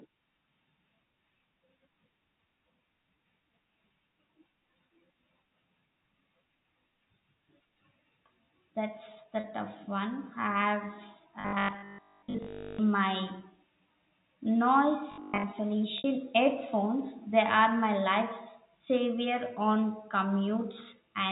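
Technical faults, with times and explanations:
9.40 to 9.44 s and 15.98 to 16.04 s, packet loss with pitch repetition: about 40 ms of audio is lost before "tough one", then 60 ms, and the receiver bridges each gap by replaying the last pitch period, so the voice briefly holds on a slightly buzzy, sustained tone.
11.41 to 12.79 s and 15.12 to 15.44 s, robotic sound from repeated short buffers: fresh audio likely arrives too seldom, so a 20 ms chunk is looped while most of the real signal is skipped, stamping a rigid 50 Hz metallic buzz onto the speech.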